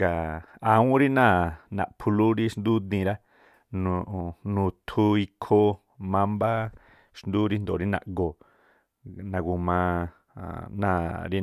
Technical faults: none

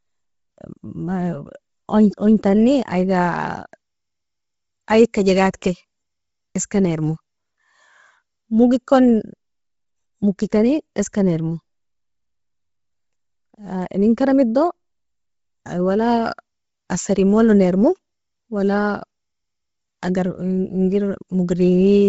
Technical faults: Bluetooth LC3 compression

